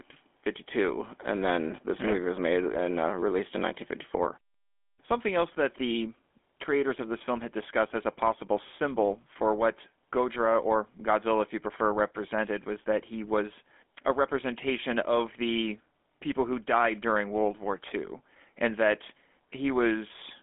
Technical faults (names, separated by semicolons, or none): GSM full-rate codec